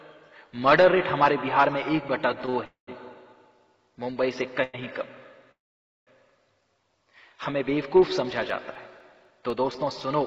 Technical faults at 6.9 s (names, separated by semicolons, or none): none